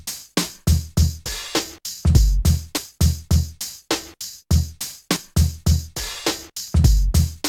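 At 1.26 s the sound jumps abruptly. The same skip recurs at 2.77, 5.16 and 6.68 s. No gap is heard; the audio simply lurches forward. The losses are brief, around 20 ms at the first and last points and around 40 ms at the middle two. The likely cause is a dropped buffer (overrun): the samples were not collected before the hardware overwrote them, so the surviving audio on either side was joined directly.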